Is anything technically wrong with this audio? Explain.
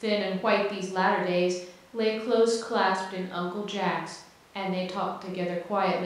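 No, nothing in this speech clip points to a technical fault. There is no problem to locate or explain.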